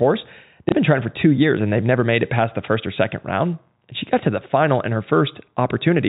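At 0.69 s there's a small blip lasting about 30 ms, through 0.72 s. That's packet loss with the last packet repeated: one packet went missing and the receiver replayed the previous one. The narrowband, under-4 kHz sound of the G.711 telephone coding carries on as usual.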